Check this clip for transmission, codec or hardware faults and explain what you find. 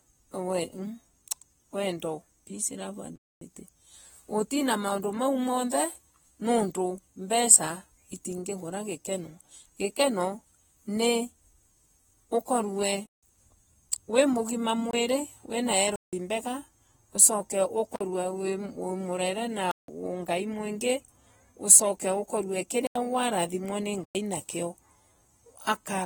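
Two faults are present. Eight blocks of digital silence break the speech, and codec damage runs through the whole clip.

The blocks of digital silence fall at 3.16 to 3.41 s, 13.06 to 13.23 s, 14.91 to 14.93 s, 15.96 to 16.13 s, 17.96 to 18.01 s, 19.71 to 19.88 s, 22.87 to 22.96 s and 24.04 to 24.15 s. The one at 14.91 s comes just after "wi mugima". The one at 17.96 s follows "mbega ucoke". The one at 22.87 s sits just before "warathimwa ni". Their lengths run from 24 ms to 256 ms. Three last 171 ms, which fits an 8192-sample buffer at 48 kHz. The 85 ms gap fits a 4096-sample buffer. In each case the output buffer was likely not filled in time, so zeros went out. The sound drops straight to nothing and returns with no fade. The shortest gaps are brief holes, and the longer ones are clear holes.

AAC compression is heard throughout. It sounds like a low bitrate, probably about 45 kbps. 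The damage is plainly audible. The encoder discards detail a hearing model rates as masked, and at this rate it runs short of bits. Sibilants turn fizzy and smeared. Sustained sounds warble, and the overall tone is dull. Nothing sounds above 19.4 kHz.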